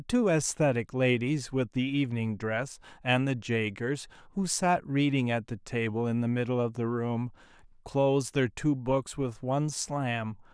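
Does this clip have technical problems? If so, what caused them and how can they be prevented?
No, there are no technical problems in this clip.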